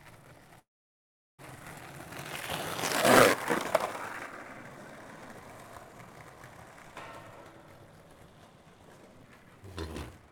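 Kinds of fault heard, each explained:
Long network dropout: the sound cuts from 0.59 to 1.41 s, leaving mostly silence, likely lost packets; unlike a brief glitch, about 0.8 s is simply gone.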